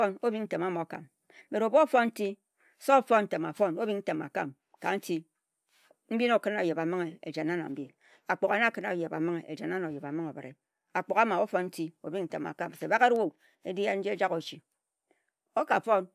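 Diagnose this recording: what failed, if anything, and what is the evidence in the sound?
Listening through the speech recording, nothing stood out as a failure at any stage of the chain.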